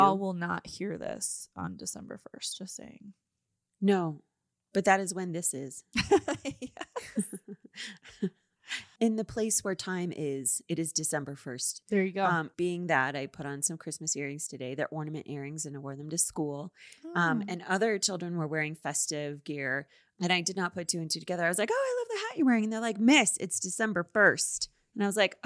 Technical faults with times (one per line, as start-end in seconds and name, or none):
none